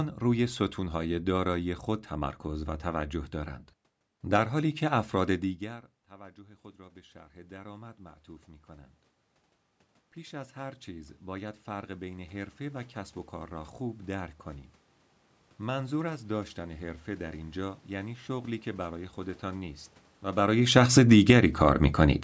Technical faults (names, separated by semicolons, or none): automatic gain rising; automatic gain falling